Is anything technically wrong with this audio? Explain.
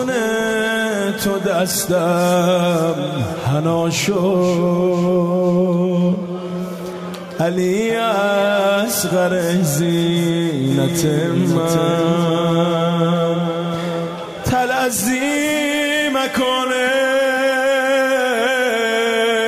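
Yes. From 10.71 to 14.83 s there is a doubled audio track: a full-band copy trails by roughly 0.7 s, about 5 dB quieter. It is likely a second, slower capture path. On the waveform and spectrogram, each event reappears as a dry, undecayed duplicate that switches on and off abruptly.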